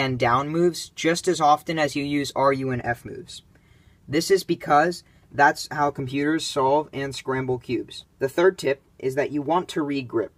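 No technical faults can be heard anywhere in this recording.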